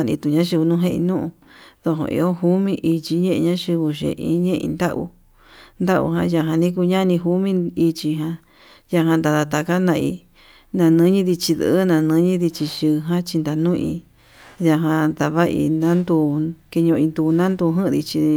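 No technical faults can be heard anywhere in the speech recording.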